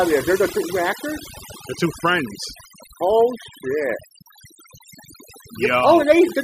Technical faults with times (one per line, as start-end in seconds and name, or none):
0.00-6.44 overdone noise removal